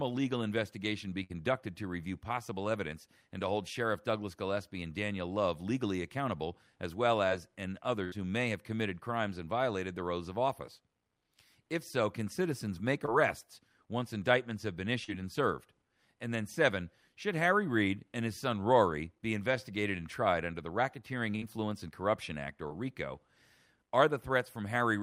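At 1.23 s, 8.04 s and 21.36 s, a burst of packet loss drops about 60, 80 and 60 ms. The last sound is stretched and faded, then the audio resumes further on, skipping material.

At 13.06 s and 15.04 s, short concealed packet loss loses only 20 and 40 ms. The gap is patched and blended back, leaving a brief smear or wobble rather than an audible jump.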